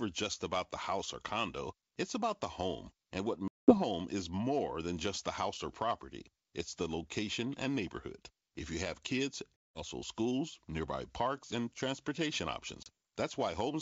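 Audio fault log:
3.48–3.78 s, 9.57–9.81 s and 12.83–12.88 s, packet loss on an ADPCM call: three abrupt silent holes of about 200, 190 and 30 ms, before "is more", between "you have kids" and "schools nearby", and after "and transportation", which points to runs of roughly twenty, twenty and a few short packets. The decoder's adaptive predictor and step size lose track of the sender, so the sound resumes with brief distortion before settling.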